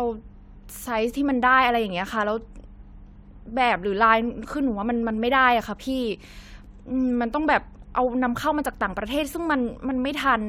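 Nothing in the signal points to a technical fault: level, continuity and timing of the speech stay steady across the whole recording.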